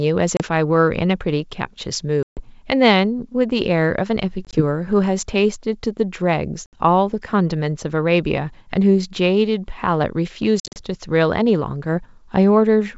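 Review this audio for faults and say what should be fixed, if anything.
Packet loss on an ADPCM call shows up five times. Hard silent gaps fall at 0.37–0.43 s (30 ms lost), 2.23–2.42 s (140 ms), 4.45–4.61 s (40 ms scattered over 80 ms, longest run 20 ms), 6.66–6.75 s (70 ms) and 10.60–10.81 s (130 ms scattered over 160 ms, longest run 50 ms). Lost packets become silence. The decoder's predictor and step size then no longer match the sender's. So the speech resumes with some distortion, and settles over tens of milliseconds. The G.722 wideband coding itself carries the speech cleanly. To prevent this, add a jitter buffer with packet loss concealment that keeps the ADPCM decoder state in step, plus redundancy or FEC on lossy links.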